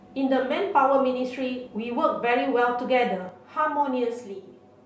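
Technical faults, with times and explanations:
3.29 s to the end: channel delay (comb filtering). One channel runs roughly 7 ms behind the other, and the mono sum cancels at evenly spaced frequencies. The first notch sits near 70 Hz, with more every 140 Hz or so. The speech turns hollow and phasey.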